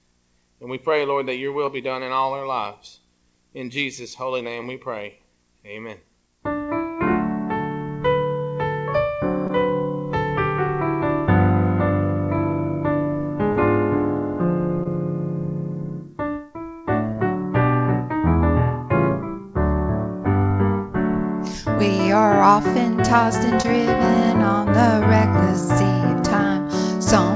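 Audio from a call shows short concealed packet loss at 1.66, 9.47, 13.53, 14.84, 17.13 and 23.62 s. Each time about 20 ms of audio missed the decoder, so the receiver extended the preceding sound and crossfaded back, leaving a brief smear or wobble. The call codec's band limit, nothing above 8 kHz, fits G.722 at 64 kbps.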